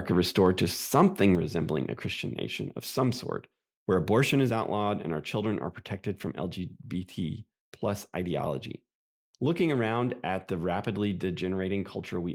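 Microphone volume stepped down at 1.35 s: the speech and background drop about 5 dB at once before "resembling a", likely the call software cutting input gain.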